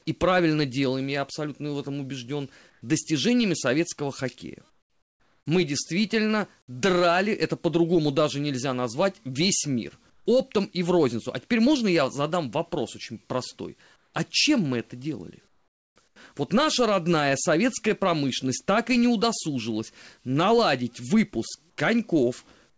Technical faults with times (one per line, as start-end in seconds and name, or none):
2.70-2.82 comfort noise in place of the background
4.70-5.46 comfort noise in place of the background
10.10-10.26 comfort noise in place of the background
13.96-14.14 comfort noise in place of the background
15.48-16.16 comfort noise in place of the background
21.70-21.78 comfort noise in place of the background
22.70-22.78 comfort noise in place of the background